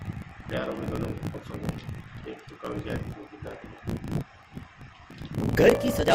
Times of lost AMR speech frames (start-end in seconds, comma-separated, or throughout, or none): none